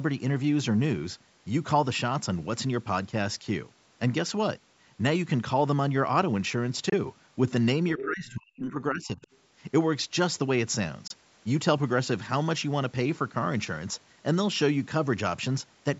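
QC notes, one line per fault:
6.89 s and 11.07 s, Bluetooth dropout: two holes of about 23 ms each, where the output goes silent and then picks up again further along, as though playback had carried on during the gap. A single lost frame of roughly that length, dropped before it reached the headphones, is the likely cause. On the waveform each shows as a short flat gap with sharp or very briefly faded edges. On the spectrogram it is a thin vertical blank stripe cutting across every frequency band.
7.94–9.21 s, speech suppressed in double talk: the speech here is turned down, with the deepest cuts reaching about 40 dB and roughly a second of the range affected. The likely cause is an echo canceller that could not separate the local talker from the loudspeaker echo while both sides were active, so it lowered them together. The waveform's envelope shrinks. The spectrogram shows fading across the speech bands.
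7.99–8.05 s and 9.22–9.38 s, other side's voice leaking through: two brief scraps of a second voice come through, the first at about 10 dB below the main speech and the second much lower, at about 30 dB below. Loudspeaker sound reaching the microphone and not fully removed by the echo canceller is the likely cause. On the spectrogram they appear as short harmonic fragments separate from the main talker's pattern. On the waveform they are small low-level bursts.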